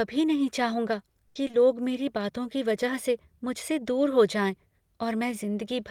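At 1.27 to 1.37 s, right after "नहीं चाहूँगा", there is a burst of packet loss. A run of about 80 ms of audio failed to arrive in time, and the receiver covered the gap by extending the last sound it had and lowering its level as the gap continued. That produces a held, decaying tail rather than silence. When real audio resumes, the 80 ms that belonged in the gap is gone, so the speech jumps forward.

Shortly after, two short concealed packet losses sit back to back, at 1.47 to 1.51 s and 1.51 to 1.55 s, just before "मेरी बातों की वजह". Each drops 20 ms, which the decoder replaced by continuing the preceding sound and then blending into the returning signal. Together they form a brief smear or wobble of about 40 ms leading into that phrase, with the original content of both slots missing.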